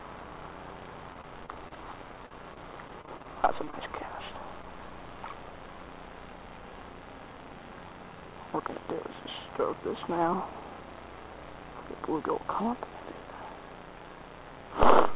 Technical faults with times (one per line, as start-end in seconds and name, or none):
1.14-1.78 repeated packet loss (robotic sound)
2.26-3.26 repeated packet loss (robotic sound)
3.64-3.74 short concealed packet loss